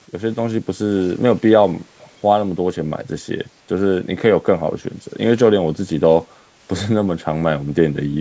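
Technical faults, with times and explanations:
1.99 to 2.08 s, echo leak: a brief, faint delayed copy of the speech surfaces for about 90 ms, trailing the original by 290 ms and sitting far below it, roughly 30 dB down. The likely cause is a far end on loudspeaker whose echo canceller let a fragment of its microphone pickup slip through, returning that residue down the line after the round-trip delay.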